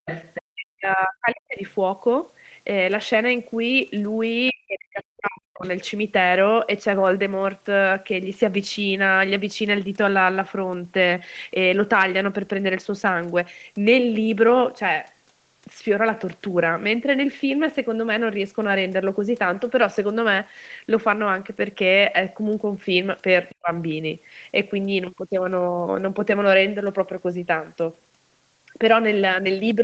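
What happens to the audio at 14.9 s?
At 14.9 s the speech is intact, with no dropout, glitch or distortion, only the normal call-path band limit that leaves nothing above 8 kHz.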